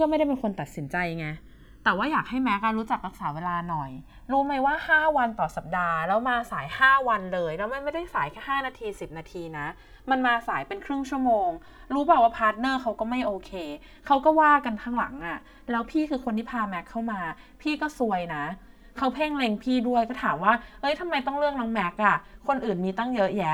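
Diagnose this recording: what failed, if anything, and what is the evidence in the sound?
Channels drifting apart, heard throughout the speech. The stage is the converters: the left and right channels were captured on two devices running from separate clocks, roughly 200 ppm apart, so the inter-channel delay grows steadily, reaching around 5 ms by the end. Summed to mono, that sliding delay forms a comb filter whose notches sweep slowly through the spectrum, giving the audio a gradual, drawn-out flanging quality.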